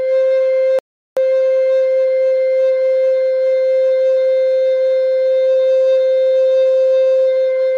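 Music with a Bluetooth stall from 0.79 s to 1.17 s: playback cuts to about 0.38 s of silence, then resumes. The likely cause is radio interference delaying packets until the headphones' buffer emptied, holding output until retransmitted data arrived.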